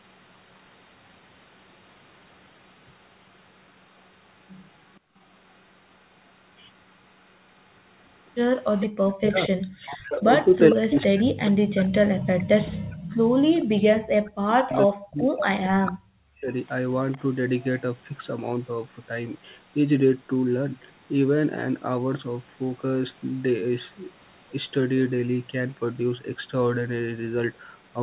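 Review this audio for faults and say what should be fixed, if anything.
At 5.0 to 5.14 s, the room background drops sharply, by about 34 dB, for roughly 150 ms, then comes back. This is background gated by the echo canceller. The canceller heard the loudspeaker playing and pulled the microphone level down hard. The room sound went with it. Prevention: use gentler, shorter suppression so the canceller never fully mutes the microphone.

A delayed copy of the speech can be heard at 8.81 to 8.86 s, 10.7 to 11.04 s, 12.38 to 12.44 s, 14.72 to 15.46 s and 16.49 to 17.82 s. It trails the original by 458 ms. Its level varies from about 10 dB to about 30 dB below the main speech. This is echo leak. The likely cause is a far-end canceller that left part of its loudspeaker pickup in the signal and sent it back. Prevention: improve the far end's echo cancellation, or have that side use a headset.

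From 9.15 to 16.52 s, the talker's speech dips and breaks up while the other side is also speaking. The deepest cuts reach roughly 40 dB, across about seven seconds. This is speech suppressed in double talk. Likely, the canceller could not tell this talker from the loudspeaker echo, so it turned both down. Prevention: use an echo canceller with better double-talk detection so the local talker stays open.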